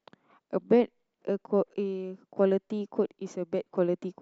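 A short speech recording, with no technical fault to be heard anywhere in it. There is nothing here to time, trace to a cause or correct.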